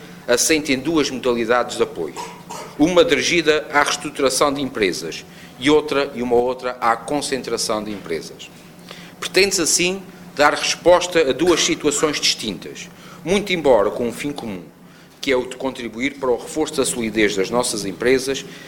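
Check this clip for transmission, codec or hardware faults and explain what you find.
Two faults are present: a steady block-rate buzz through the whole clip, and two abrupt level drops.

A buzz near 93.8 Hz tracks the signal's loudness throughout. This is a filter restarted on every block, its state cleared each time, which fits a 512-sample buffer.

At 6.4 s the sound and its noise floor drop together by about 6 dB until 6.82 s, and from 14.56 s to 16.72 s they fall by about 5 dB. These are likely sudden gain jumps, a gain setting switched without a ramp.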